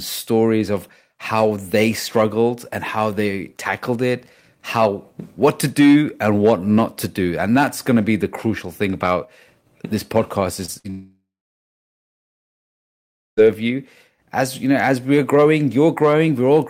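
Just after "thing about this podcast", two short concealed packet losses occur at 10.65 to 10.70 s and 10.74 to 10.77 s. Each drops about 20 ms of audio, and the receiver patches it by extending the preceding sound. They are heard as quick smears or wobbles and appear on a spectrogram as slightly blurred, repeated slivers.

At 10.79 to 10.86 s, a burst of packet loss removes about 60 ms. The continued sound fades into a brief held buzz or hiss. The waveform shows a decaying, repetitive patch before the audio resumes slightly further on.

From 10.9 to 13.39 s, a long stretch of about 2.5 s is gone, likely a long network dropout. The concealed tail fades away, leaving roughly 2.1 s of silence, a flat line on the waveform and an empty spectrogram band, before the audio returns with the gap missing.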